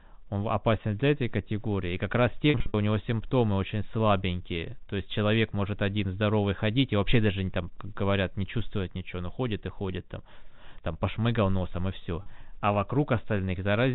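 At 2.5 s to 2.74 s, packet loss with pitch repetition breaks up the speech. About 160 ms of audio is missing, scattered over 240 ms, with the longest gap 60 ms, a pattern that fits several lost 20 ms packets. The receiver bridged each gap by repeating the last pitch period, so the sound briefly holds a buzzy, sustained tone. A shorter 40 ms loss at 12.22 s produces one brief held buzz within the narrowband G.711 telephone audio.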